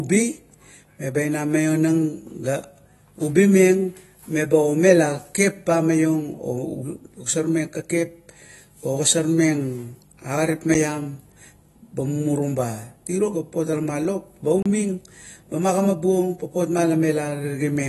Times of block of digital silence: 10.74, 14.62-14.66

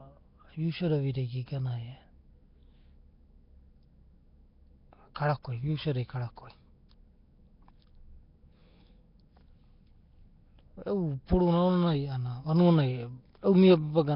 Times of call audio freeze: none

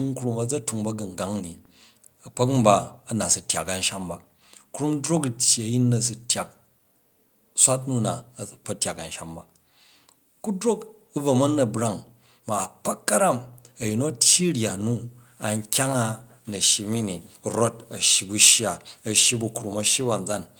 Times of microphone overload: 18.42-18.49

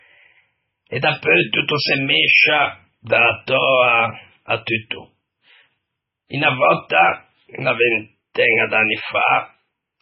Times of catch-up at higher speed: none

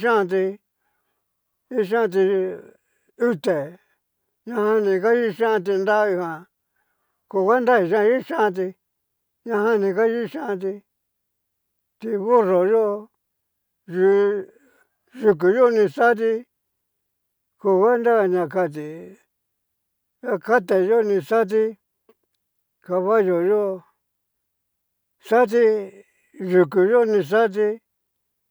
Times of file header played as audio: none

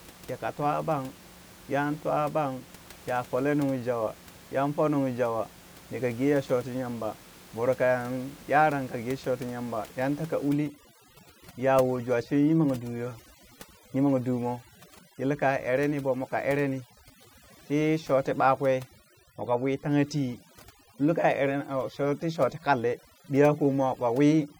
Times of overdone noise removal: 10.49-24.59

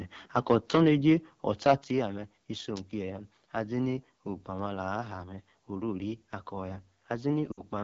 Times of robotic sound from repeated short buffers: none

